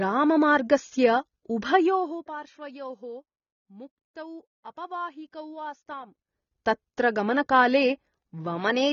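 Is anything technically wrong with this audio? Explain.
Yes. Throughout, this speech carries plainly audible AAC compression damage: nothing above 6.9 kHz, likely from low-bitrate AAC-LC quantising coarsely, which fits about 24 kbps, so it sounds dull and smeared.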